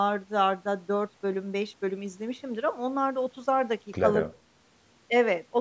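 No faults are audible in this speech; the call's microphone processing is doing its usual job, trimming the lowest bass and leaving nothing above 8 kHz.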